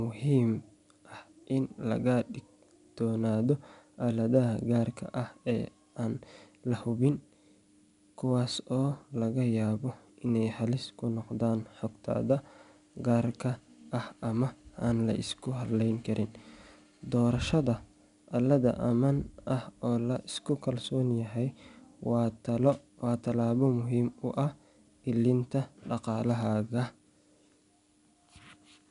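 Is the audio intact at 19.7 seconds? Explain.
No. At 19.7 s the speech carries 4-bit ADPCM compression, present throughout. Each sample is coded as a coarse step from a prediction, so a gritty hiss rises with every loud syllable and nothing sounds above 10.6 kHz, consistent with about 88 kbps. Unlike MP3-style artefacts, there's no swirling or warbling.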